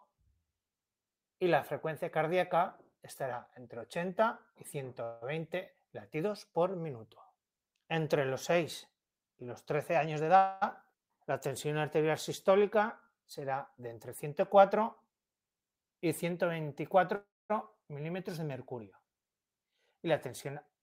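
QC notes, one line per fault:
5.03–5.24 s, 10.37–10.64 s and 17.15–17.52 s, call audio freeze: the sound stalls and its last moment is stretched into a buzz or hiss that fades, filling 0.18 s, 0.25 s and 0.34 s. The third fades to silence for 0.23 s. The sound then resumes where it stopped with nothing lost, only delayed. The likely cause is held-up packets draining the jitter buffer.
10.05–10.36 s, 13.79–16.33 s and 19.43–20.79 s, jitter buffer speed-up: the sound plays faster at unchanged pitch, at 113%, 107% and 109% speed, so all three passages sound hurried. The receiver is trimming many short pitch-period pieces in a row to shed the extra delay that built up in its buffer, about 50 ms, 200 ms and 150 ms in total.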